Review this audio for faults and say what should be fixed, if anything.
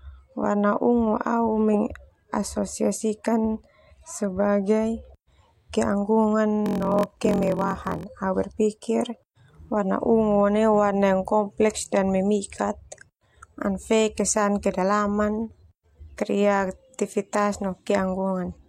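Block size mismatch (padded), 6.64 to 8.04 s: short blocks padded with silence into larger reads, which fits 1024-sample reads, cause a 43.1 Hz buzz and speech slowed to 0.938× with its timbre kept. Prevent it by matching the block sizes that each stage writes and reads, or by buffering between them.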